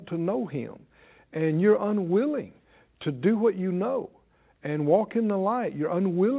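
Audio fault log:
No fault to log; the speech passes through the call path as expected, with nothing above 4 kHz.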